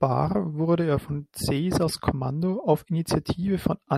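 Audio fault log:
1.59 s to 3.98 s, channel delay (comb filtering): From 1.59 s to the end, one channel runs late by a tiny amount, around a sample, roughly 0.02 ms. Summed to mono, the two copies cancel where they fall out of phase. With so small an offset, the first notch sits up near 20 kHz. The speech loses its top-end air and sheen, so it sounds slightly dull and muffled.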